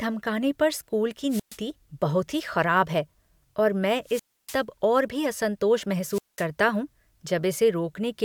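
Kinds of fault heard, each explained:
Wireless microphone squelch dropout: the radio link from an analogue FM mic fades far enough that the receiver's squelch shuts the output off. In this speech you get three of them, each a short burst of hiss and then a dead gap of about 120, 290 and 200 ms before the voice comes back.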